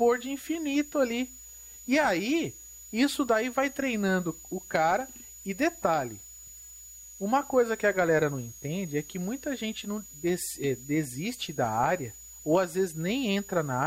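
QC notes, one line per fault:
Throughout, switching supply whistle. A thin, high whistle sits under the speech for the whole clip, at around 7 kHz. Its pitch wanders between about 6.69 and 6.93 kHz rather than holding steady. The whistle sits roughly 20 dB below the speech. A switching power supply near the recording chain is running in an audible burst mode or beating with another one. As its load shifts, the switching rate moves, and the pitch drifts with it.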